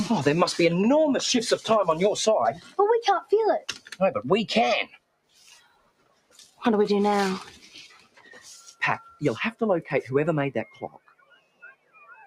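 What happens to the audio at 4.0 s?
Right at 4.0 s the audio is coming out of a dip caused by sound cut by the noise suppressor, which runs from 3.61 to 3.99 s. A speech-oriented suppressor judged this stretch to be noise and pulled it down by up to about 15 dB, so the sound sinks and thins for roughly 0.4 s before coming back up. On a waveform the envelope narrows sharply across that span. On a spectrogram the band goes pale, with sustained energy fading first and any sharp onsets left standing.

Under that dip, the whole clip carries a noise suppressor applied to music or sounds. The processor keeps treating steady tones, ambience and decaying tails as noise, so its gain swings by around 15 dB. Attacks pass while held portions and tails are pushed down, which gives a pumping, fluttering quality. A waveform shows the level breathing unevenly throughout. On a spectrogram, tails break off early and sustained partials look patchy instead of continuous.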